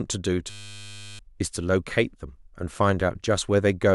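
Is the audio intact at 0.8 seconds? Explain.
No. A system hang loop runs from 0.5 to 1.19 s, so 0.8 s falls inside it. The computer or driver stalled while the sound hardware kept replaying the same ring buffer, which points to a buffer about 10 ms long. That fragment repeats roughly seventy times, giving a steady 100 Hz buzz in place of the speech. About 0.7 s of the real audio is lost.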